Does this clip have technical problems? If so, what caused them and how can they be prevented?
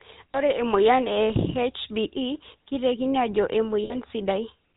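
Yes. GSM full-rate codec damage runs through the whole clip. The coder models the vocal tract as a filter and drives it with a sparse, regularly spaced pulse train, keeping only every third excitation sample, and it discards everything above 4 kHz. That leaves this speech plainly buzzy and gravelly, with a dull top end, which fits the 13 kbps GSM full-rate coder. To prevent it, carry the call over a wideband codec such as AMR-WB or Opus instead of legacy full-rate GSM.

Lost GSM frames occur at 0.32–0.35 s and at 3.84–3.95 s, the second right after "keitekini ajo". When a frame arrives damaged, the decoder reuses the last good frame's filter and excitation settings. Each gap is therefore bridged by a rough, metallic ring rather than silence. The short gap fits one 20 ms frame, and the longer one fits about three frames, or 60 ms. To prevent it, improve radio coverage or use stronger channel protection so fewer frames arrive corrupted.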